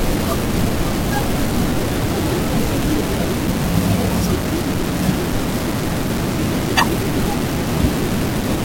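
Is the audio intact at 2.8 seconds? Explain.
No. A loud pop lands at 2.83 to 2.85 s, a single sharp burst peaking about 10 dB above the speech, likely from a sudden voltage step such as a switch or static discharge. Unlike a dropout, the speech carries on underneath rather than vanishing.

The same moment also carries the low bit depth without dither that runs through the whole clip. The grain sits only about 10 dB below the speech, which fits 4-bit rounding, likely done without dither. Unlike steady hiss, this error tracks the signal, turning gritty and sputtery as the level changes.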